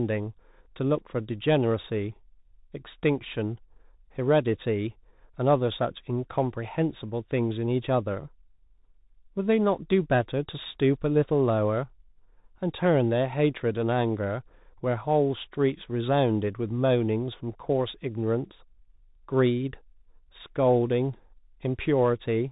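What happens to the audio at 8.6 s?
Bluetooth CVSD headset codec damage at 8.6 s, present throughout: one-bit adaptive-step coding caps bandwidth near 3.8 kHz, leaving muffled, scratchy sibilants over granular hiss.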